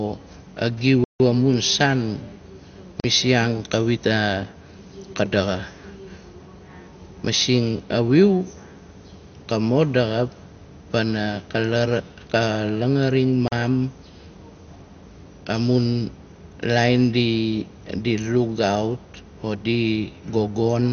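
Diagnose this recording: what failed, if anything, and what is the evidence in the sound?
The whole speech clip sounds dull and gurgly, with nothing above 6.5 kHz and a grainy, coarse texture. That's likely MP2 compression at the codec stage. Layer II starved of bits shuts off its upper sub-bands and quantises the rest roughly, which fits something near 48 kbps.

There are three blocks of digital silence, probably from the driver or buffer stage: a 160 ms hole from 1.04 to 1.2 s, and 40 ms gaps at 3.0 to 3.04 s and 13.48 to 13.52 s. Each cuts hard to silence and back with no fade, as when the output buffer isn't filled in time.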